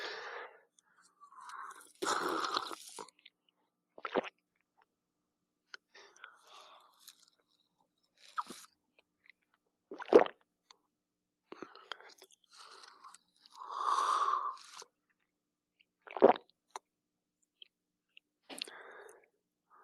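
A noise suppressor applied to music or sounds runs throughout the clip. It was built for speech, so it treats the steady parts of the sound as noise. The level keeps swinging by around 5 dB, which makes the audio pump and thin out while attacks still get through.

Sound cut by the noise suppressor happens at 0.51–2.02 s, 3.11–5.94 s, 6.89–11.51 s, 13.18–13.45 s and 14.86–18.49 s. Held and decaying material sinks by up to about 19 dB, about 21 dB, about 21 dB, about 14 dB and about 21 dB respectively.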